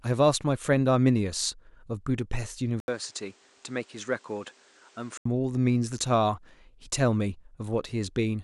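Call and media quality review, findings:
Speech turns duller and quieter 2.80–5.25 s, then clears; 80 ms gap at switch, nothing above 9.7 kHz, level down around 5 dB, new noise roughly 30 dB under speech. Likely input switched to a poorer device with a narrower band.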